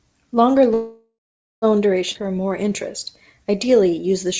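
Speech carried over a call link, with a band limit at 8 kHz that fits G.722 at 64 kbps. From 0.74 s to 1.65 s there is a call audio freeze: the last sound is drawn out into a fading buzz that sinks to silence for about half a second. Then the talking resumes exactly where it stopped, nothing lost, just 0.88 s of delay inserted. The likely cause is packets held up in transit, so the jitter buffer ran dry and the receiver had to invent sound until they arrived. At 2.13 s a skip ahead follows: playback jumps forward with only an 18 ms join, and roughly four tenths of a second of speech is gone, the two sides butted together. Later audio was already queued, so a stretch was dropped, either on the way or by the jitter buffer when it overflowed. Two jitter buffer slow-down passages follow, from 2.22 s to 2.69 s at 90% speed and from 3.44 s to 4.28 s at 91%. In both, the speech drags with stretched sounds at unchanged pitch. 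Here the buffer was rebuilding its reserve by repeating single pitch periods and pause fragments, adding 51 ms and 85 ms respectively.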